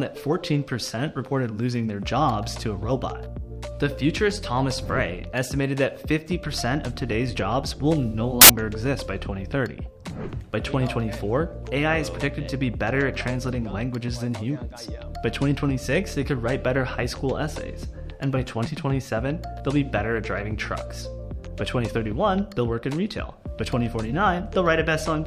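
At 8.42 s a burst of loud, harsh broadband noise cuts in and lasts until 8.50 s, about 80 ms. These are samples built from the wrong bytes. The reader assembled each value wrongly, so fast-changing low bits became the dominant part of every sample.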